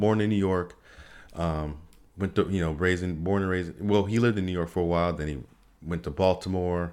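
Speech recording with no technical faults detected anywhere in the clip.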